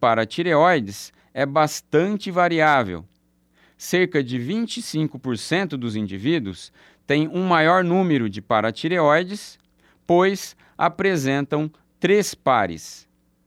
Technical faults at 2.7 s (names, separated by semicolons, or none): none